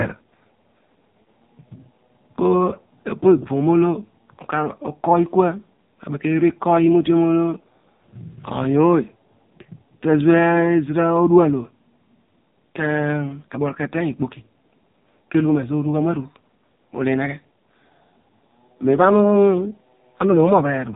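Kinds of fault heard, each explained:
AMR narrowband mobile codec: The speech has the buzzy, synthetic grain of the narrowband mobile codec, which rebuilds each short frame from a vocal-tract model excited by a handful of pulses. The damage here is heavy and fits one of its lowest-rate modes, around 6 kbps. Nothing passes above about 3.8 kHz. A plain low-pass filter would only dull the sound, whereas here the voice itself sounds rebuilt and robotic.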